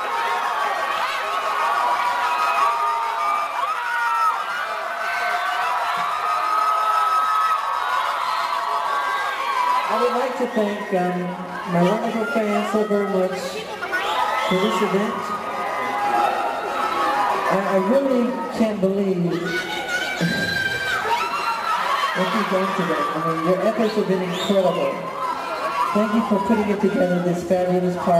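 No technical faults are audible.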